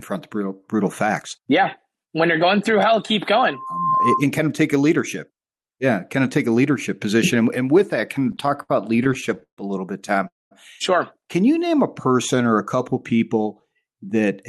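Right after "going through hell keep", at 3.49 s, a loudspeaker feedback squeal kicks in: the mic is hearing its own loudspeaker, and a 1 kHz tone builds over roughly 0.4 s to about 5 dB above the speech, ringing until 4.26 s, just before "kind of take a".

From 8.15 to 9.59 s, after "and with that", you get repeated stalls (stutter). Packets kept showing up late, so the jitter buffer kept running dry and the receiver stretched the last sound to cover. There's a whole string of little hitches, the longest about 146 ms, adding up to roughly 362 ms of padding, about a quarter of that stretch. Nothing's lost, it just drags until "a little bit".

Straight after "a little bit", at 10.27 s, there's a call audio freeze: a brief fading fill and then about 200 ms of silence before the speech picks up at 10.53 s, 235 ms later than it should. The likely cause is packets held up in transit emptying the buffer, with nothing actually missing.

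Finally, from 11.55 to 13.19 s, there's a jitter buffer slow-down. The receiver padded out its reserve by repeating single pitch periods or bits of pauses, adding 112 ms, so the speech plays at about 94% speed with the pitch unchanged and sounds slightly drawn out.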